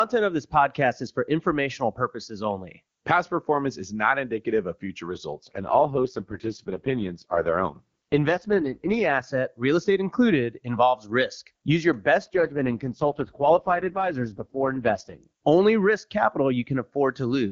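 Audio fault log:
5.34–9.24 s and 12.21–15.24 s, AMR rate drop: the speech turns rough, buzzy and synthetic, with no gap and no loss of bandwidth, then clears again. That fits the network pushing the AMR-WB codec from its clean 23.85 kbit/s mode down to about 6.6 kbit/s.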